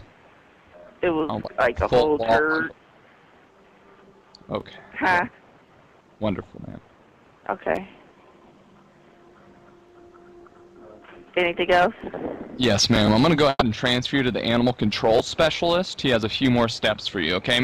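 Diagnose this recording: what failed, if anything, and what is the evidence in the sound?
Burst of packet loss at 13.49 to 13.63 s, a network fault. The receiver stretches the last sound across about 120 ms while fading it, and the final 30 ms or so goes silent. Playback then resumes with 120 ms of audio skipped.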